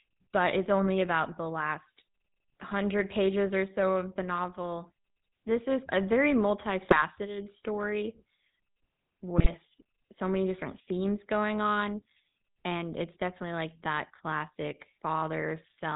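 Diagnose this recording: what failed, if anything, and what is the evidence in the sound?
The codec stage is at fault: the whole recording has passed through the GSM full-rate codec, and its damage is plainly audible. This coder models the vocal tract and excites it with a sparse, regularly spaced pulse train, so the speech takes on a buzzy, gravelly roughness from start to finish. Nothing survives above 4 kHz, which leaves the voice dull and boxed-in. That character fits the original 13 kbps GSM coder.

The network stage also failed in two short bursts of GSM bit errors, at 6.82 to 7.02 s and at 9.38 to 9.54 s. In each, the speech collapses into squawks, pops and gargling for roughly a fifth of a second or less. That points to corrupted bits reaching the decoder across several consecutive 20 ms frames, at an error rate of a few percent. Damaged filter, pitch or gain parameters then bend the spectrum or spike the level.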